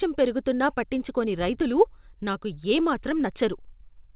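The sender's audio clock runs about 4 percent faster than the receiver's, a clock drift between sender and receiver that lasts the whole clip. Because packets keep arriving slightly ahead of schedule, the jitter buffer steadily fills instead of holding a steady depth, and the receiver has to keep discarding material to stop it overflowing. The result is a faint, recurring unsteadiness in the timing of the speech that never settles.

From 0.03 s to 3.89 s the receiver makes repeated timing corrections, trimming short slices of audio to keep pace with a sender running at 104 percent speed. All the edits remove material rather than repeat it, and they fall at uneven intervals instead of on a regular beat. Each cut is small, so it registers as a slight hiccup or a momentary lurch in tempo within the speech, which is already band-limited to nothing above 4 kHz by the G.711 call codec.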